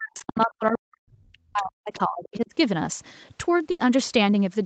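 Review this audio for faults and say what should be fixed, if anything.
From 0.00 to about 2.52 s the speech is pulled down in level, with the deepest dips reaching around 40 dB and roughly 2 s of the stretch affected. This is speech suppressed in double talk, likely caused by the echo canceller meeting simultaneous far-end and near-end speech: unable to separate the talker from the loudspeaker echo, it attenuated everything. Prevention: use a canceller with better double-talk detection and less aggressive nonlinear suppression.

Two short fragments of the other side's voice leak through, at 0.40 to 0.53 s and at 1.94 to 1.98 s, each sitting roughly 25 dB below the talker. These are likely residual loudspeaker echo the canceller failed to remove, so the other side's voice reaches the microphone path as faint scraps. Prevention: improve echo path modelling and convergence, or reduce loudspeaker-to-microphone coupling with a headset or lower playback level.

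At 3.71 to 3.81 s there is a burst of packet loss. The decoder bridges the gap by extending the last sound for about 80 ms while fading it, which gives a held, decaying tail. Playback then resumes with about 80 ms of audio skipped. Within the Opus path, whose 8 kHz band limit applies throughout, this points to consecutive lost or late packets. Prevention: enable in-band FEC and allow the jitter buffer more headroom.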